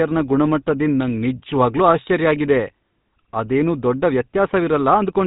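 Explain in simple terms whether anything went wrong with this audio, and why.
The speech passes through a GSM full-rate codec from start to finish, which rebuilds the voice from crude pulses, leaving an audible buzzy, gravelly roughness and cutting the crisp highs.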